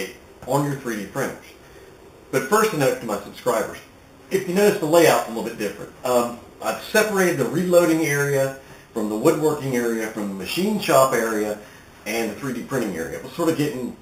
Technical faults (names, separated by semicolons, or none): imaging from sample-and-hold upsampling